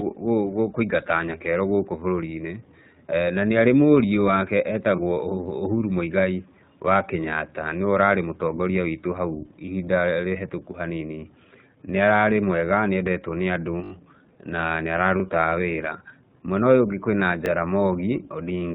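Throughout the speech, the iLBC codec limits the bandwidth: nothing above 4 kHz comes through, so sibilants sound dull and the voice has a slightly rough, synthetic edge. The character fits iLBC's 15.2 kbps mode with 20 ms frames. The codec encodes each frame's excitation independently, and at this rate the coding damage is plainly audible across the whole clip.

At 4.96 s, one lost iLBC frame (about 20 ms) is filled by the decoder repeating the last pitch cycle mixed with noise. It is heard as a brief held, faintly buzzy vowel. The same thing happens at 9.66 s, right after "witũ hau", and again at 15.50 s. In each case the voice recovers almost immediately because iLBC frames do not depend on earlier ones.

From 13.84 to 13.92 s a repeated buffer occurs: new audio arrived late, so the playback device replayed the same 20 ms block four extra times. This produces a short, hard-edged stutter with a join click at each repeat. 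Single extra plays at 15.20 s and 17.46 s are each heard as a brief click-like buzz. The delay seems to be absorbed without dropping any audio, which fits a 20 ms output buffer.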